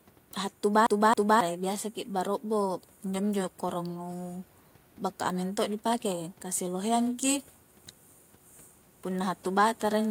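From 0.86 to 1.41 s, the playback acts like a CD stuck on one turn: the laser jumps back a track at the same spot, so a 0.27 s slice of speech repeats twice with a brief mute at each jump, a quick, even stutter just before "i biasa ki".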